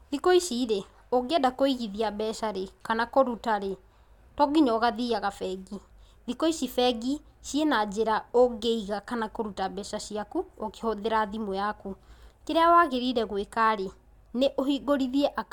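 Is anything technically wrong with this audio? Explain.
No, nothing in this recording stood out as technically wrong on listening.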